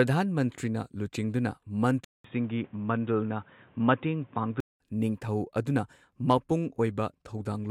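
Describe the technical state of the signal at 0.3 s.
At 0.3 s the speech signal is intact, with no dropout, clipping, distortion or other fault audible at that moment.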